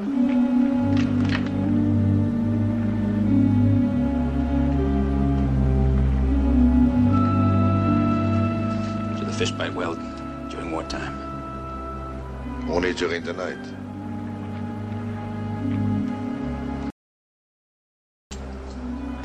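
At 16.90 s the sound drops out to silence until 18.31 s, about 1.41 s of silence with no room tone, unlike a gate or quiet passage, likely from lost input.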